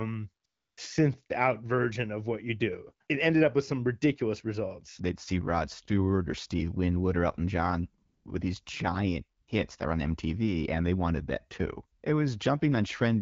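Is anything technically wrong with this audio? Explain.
Yes. The speech has four short stretches of AMR comfort noise, at 0.45 to 0.77 s, 8.05 to 8.25 s, 9.41 to 9.47 s and 11.99 to 12.03 s, lasting 320, 200, 60 and 40 ms. In each, the sending phone decided nothing was being said and stopped transmitting speech frames. The receiver then generated a smooth, steady noise from a rough estimate of the background's level and spectral shape. You hear the real room tone switch abruptly to this even synthetic hiss and back. A noise gate would drop to near silence, and packet-loss concealment would smear or repeat speech-like sound. Here the gap is filled with featureless, stable noise. Underneath, the light AMR wideband (HD Voice) coding keeps the speech clear, which points to one of the higher rates such as 12.65 kbit/s.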